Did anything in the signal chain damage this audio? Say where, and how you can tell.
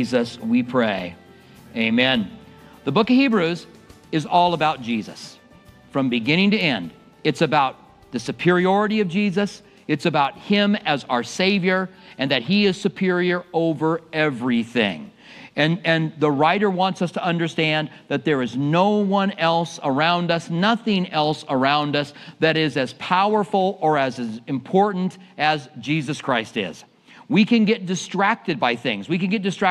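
Yes. From 0.28 s to 29.61 s there are clock slip clicks: faint, evenly spaced ticks about every fifth of a second, some 150 in all, each a single sample dropped or repeated. The damage points to the converter or driver stage, likely two devices free-running on separate clocks about 100 ppm apart. The strict regularity, the tiny size of each tick and the steady rate all the way through set it apart from buffer dropouts or random crackle.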